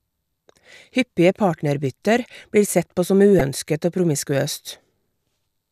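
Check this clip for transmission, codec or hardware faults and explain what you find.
One fault is present: damaged data in a compressed stream at 3.39 s. Corrupted bytes left the decoder misreading frames, losing sync and hunting for the next valid frame header. The result is a brief blip in the speech.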